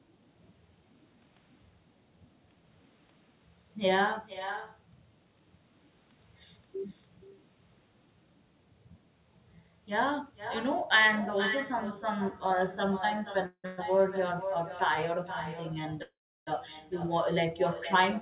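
Echo with no canceller runs through the whole clip: every phrase returns about half a second later, roughly 10 dB quieter and thinner. The far end's loudspeaker feeds its microphone and nothing removes that copy, which is also confined below 4 kHz like the rest of the call audio.

A call audio freeze comes at 13.46 to 13.80 s in two back-to-back parts. The first fills 177 ms, fading to about 80 ms of silence. The second adds 119 ms of stretched sound without going silent. The likely cause is late packets draining the jitter buffer, so the receiver extended the last sound until audio resumed where it stopped. Nothing is lost, but everything after is delayed by almost 0.3 s.

A longer call audio freeze follows at 16.03 to 16.49 s. A brief continuation of the last sound decays into about 360 ms of silence. The 441 ms wait is inserted as a gap, and the audio picks up again intact.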